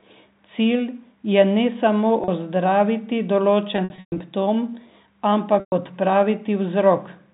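At 2.24 s, after "je ne samo", a 40 ms packet loss with pitch repetition briefly holds the sound as a buzzy sustain. From 3.76 to 4.20 s, after "je ne samo ozdraviti", scattered losses totalling 260 ms (longest 120 ms) repeat the last pitch period, then fade. At 5.60 s a 120 ms loss fades toward silence. Unlike a plain dropout, each gap is bridged by a repeated period rather than clicks or abrupt silence.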